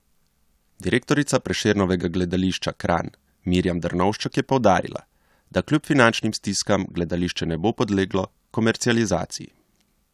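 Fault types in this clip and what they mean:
No faults can be heard anywhere in this speech recording.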